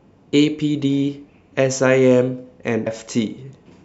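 At 2.86 s the speech jumps ahead by roughly 150 ms as compressed frames are skipped, a few 32 ms frames lost.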